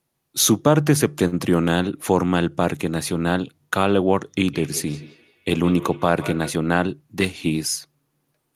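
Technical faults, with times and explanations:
1.27–1.35 s: short stall from a late packet. A packet arrived late and the jitter buffer ran dry. The receiver stretched the last sound for 46 ms until it came. Nothing is lost, but the sound hangs briefly. The delay grows by 46 ms.
4.37–6.60 s: feedback echo between two devices. A second device in the room replays this speech, and the microphone picks it up again. Each echo canceller ignores the other device's output. The speech returns about every 150 ms, peaking at about 16 dB below the direct speech.
6.87–7.51 s: jitter buffer speed-up. The buffer held more audio than its target. The receiver trimmed short pitch-period slices, around 50 ms in all. Speech runs at 107% speed with unchanged pitch. It sounds slightly hurried.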